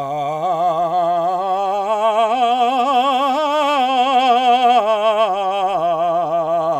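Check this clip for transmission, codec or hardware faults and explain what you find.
Nothing wrong turns up here, and the music comes across just as it should, with no sign of trouble from the transmission, the encoding or the hardware.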